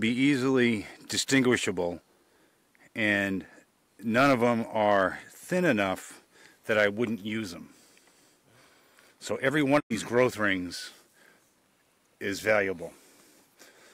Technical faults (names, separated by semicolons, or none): digital broadcast dropout